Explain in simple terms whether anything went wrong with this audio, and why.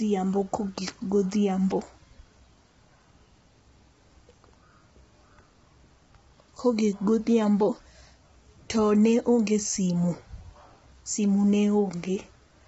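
From start to finish the speech sounds rough and grainy, with a hiss-like fill between the tones of the voice and nothing above about 7.7 kHz. This is likely heavy low-delay AAC compression, the video-call codec, here squeezed into too little data.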